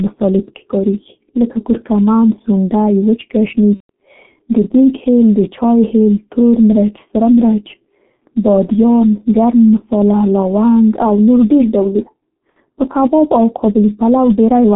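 Throughout, the speech has passed through a G.723.1 codec, whose coarse 30 ms frames and slow-moving voice model, pointing to a rate near 6.3 kbit/s, leave it heavily damaged: the band runs only from 150 Hz to 3.5 kHz, so it sounds muffled and hoarse with smeared consonants.

From 3.74 to 3.90 s, VoIP packet loss concealed by the speech codec drops about 150 ms, which fits five lost frames. The decoder keeps repeating its last pitch and filter at falling gain, so the sound stretches into a fading buzzy tone or coloured noise, muted from the third lost frame, and stays weak briefly afterwards. A shorter loss of about 60 ms follows at 12.51 to 12.58 s, between "او نور ډېر ډولونه" and "په کباب او", giving a brief stretched, fading smear.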